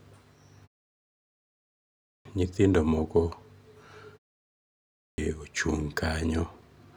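At 1.64 s, after a pause of about 1.05 s, the speech returns with a clipped start after a pause: roughly 0.61 s is swallowed up to 2.25 s while the output device wakes, so it begins abruptly mid-sound. The same happens at 4.57 to 5.18 s after a 0.47 s pause. On a waveform, each onset jumps straight from flat silence into the speech. A spectrogram shows energy starting with a hard vertical edge and no rising lead-in.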